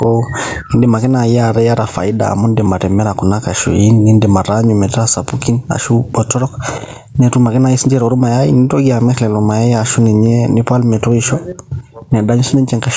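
Gain pumping runs through the whole recording, likely from input gain set far too high with a fast limiter clamping each loud syllable. The gain swings by around 10 dB, leaving levels squashed within the call's 8 kHz band.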